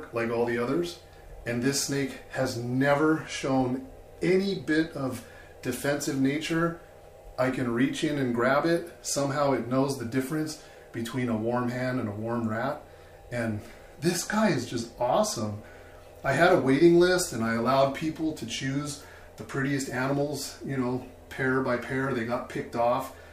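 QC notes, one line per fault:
Nothing to flag here; I listened all the way along and didn't catch a single problem worth a line.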